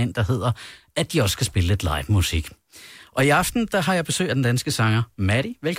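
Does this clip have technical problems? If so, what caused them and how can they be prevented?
No, nothing stood out as a technical problem on listening to this speech clip.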